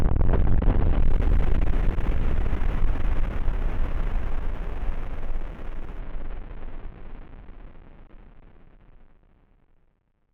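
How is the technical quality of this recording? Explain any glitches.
The recording has one clear fault. From 1.00 to 5.99 s, a faint, gritty fizz rides on top of the sound. It is inharmonic, tracks the louder and brighter moments, and sits roughly 45 dB below the signal. This is crude rate conversion: samples were repeated to stretch the rate by a small ratio, apparently 44.1 kHz to 48 kHz, without any filtering. The repeating error pattern creates shifted, inharmonic copies of the audio itself.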